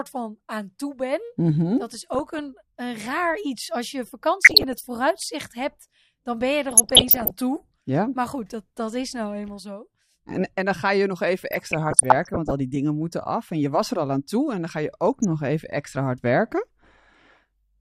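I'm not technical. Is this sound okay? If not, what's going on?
No. This speech has DAB burbling, short bursts of noisy blips over the voice at 2.14–2.39 s (just before "een raar"), 4.41–4.87 s, 6.68–7.30 s, 11.51–12.51 s (between "ga je nog even" and "die dingen moeten af") and 15.12–15.25 s (between "en dan ga je" and "even extra hard werken"). Weak digital radio reception let errors into the audio data, so slices of the sound get short blips of noise.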